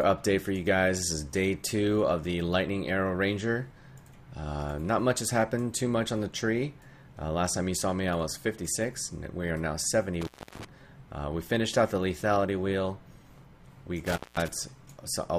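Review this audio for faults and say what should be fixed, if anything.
Intermittent contact breaks the signal twice. The first dropout runs from 10.21 to 10.65 s, with the line fully open for about 0.33 s. The second runs from 14.06 to 14.48 s, open for about 0.19 s. In each case the sound cuts out, with crackle as the contact breaks and remakes. Faint hiss remains during the gap. This points to a loose cable or plug. Reseat or replace the suspect cable and connectors, and secure them against movement.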